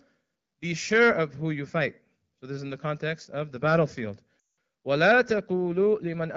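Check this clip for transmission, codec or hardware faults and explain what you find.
One transmission fault is present: a run of lost AMR speech frames at 4.40 s, in audio carried by the AMR wideband (HD Voice) codec, whose clear, lightly coded sound fits a rate around 12.65 kbit/s. The gap lasts about 180 ms, which fits roughly nine 20 ms frames in a row failing their checksum after radio errors. With no valid data, the decoder repeats the last good pitch and vocal tract parameters while ramping the gain down. The speech drops to near silence within about two frames, as expected in wideband. When good frames resume, the voice returns briefly weak or rough before settling.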